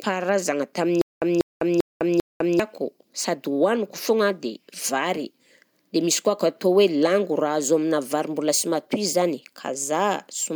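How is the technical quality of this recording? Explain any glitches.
The recording has one glitch, a stutter with silent gaps. From 1.01 to 2.60 s, a 192 ms burst of speech repeats four times. Each repeat is followed by about 203 ms of dead digital silence, so the pattern recurs every 395 ms. A stalled stream or player likely caused it, replaying its last fragment on each retry and then running empty. The speech that belonged in that span is lost.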